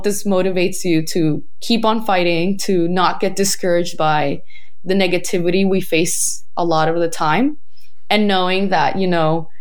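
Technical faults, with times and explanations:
Throughout: DC offset. The entire speech waveform sits shifted off zero by a constant of about -21 dBFS. This shift is inaudible as a sound itself. It eats into available headroom, so peaks clip sooner, and appears as steady energy at 0 Hz.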